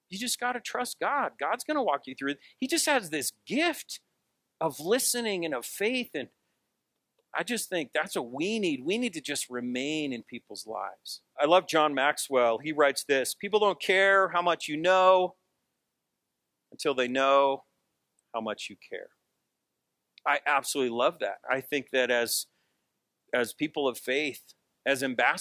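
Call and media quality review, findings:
No technical faults found: level, continuity and timing of the signal stay steady, with nothing in the audio path calling for a ticket entry.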